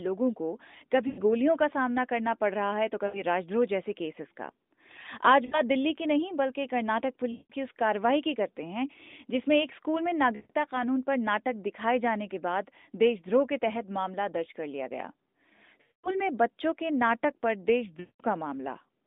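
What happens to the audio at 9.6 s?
Nothing goes wrong at 9.6 s; the speech carries on intact there, with only the band-limited sound of the AMR narrowband mobile codec working normally.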